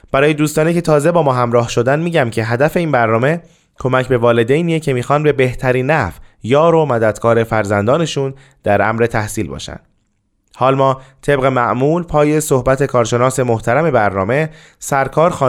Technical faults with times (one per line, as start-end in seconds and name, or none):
none